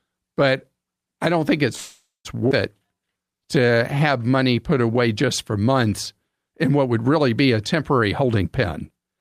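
Call audio freeze, 1.75 to 2.27 s: the speech halts and the last sound is held as a fading buzz for about a third of a second, trailing into roughly 180 ms of silence before the talker resumes exactly where they stopped. Packets were likely held up in transit so the jitter buffer ran dry, and the receiver filled 495 ms on its own. Nothing is lost; a gap has simply been inserted into the flow.

Skip ahead, 2.49 to 2.52 s: about a third of a second of speech vanishes, bridged by only a 15 ms join, so the sentence lurches forward mid-flow. Later audio was already waiting when a chunk was dropped, either in transit or by the jitter buffer overflowing. The two sides of the jump meet almost directly, leaving a clipped, abrupt transition where part of a phrase is simply absent.

Jitter buffer slow-down, 2.83 to 4.94 s: the talker sounds slightly stretched and drawling, running at about 88% speed while pitch stays unchanged. 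To rebuild a reserve, the receiver repeated single pitch periods and bits of pauses many times over, adding 252 ms in total. Vowels are drawn out.

Jitter buffer speed-up, 7.99 to 8.44 s and 8.90 to 9.18 s: speech becomes hurried at unchanged pitch, first at about 132% speed with roughly 150 ms trimmed, then far more rushed at 176% with about 200 ms cut. The buffer was holding more than its target delay, so it snipped out short pitch-period pieces repeatedly to drain the excess, compressing syllables and making the final stretch sound gabbled.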